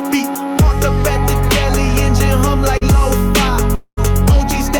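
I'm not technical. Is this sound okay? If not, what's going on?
No. A short concealed packet loss happens at 2.77 to 2.83 s. About 40 ms of audio arrived too late, so the receiver filled the gap by stretching the sound just before it, then blended back. You hear a brief smear or wobble.

A long network dropout is the likely cause of the break from 3.75 to 3.99 s. About 220 ms never arrived. The receiver kept the last sound going as a fading buzz or hiss, then about 70 ms of near silence, before the audio resumes with that piece missing.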